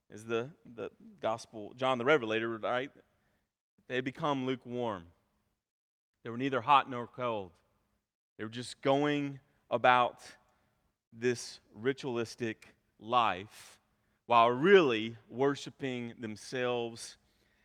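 Nothing in the speech recording stood out as a technical fault when listened to.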